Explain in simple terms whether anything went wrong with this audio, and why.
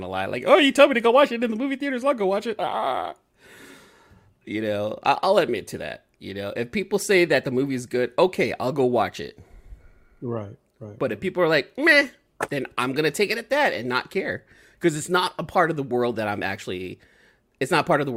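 Nothing went wrong with this speech recording that a careful listener can pick out. At no point does anything happen to the sound that would point to a technical problem.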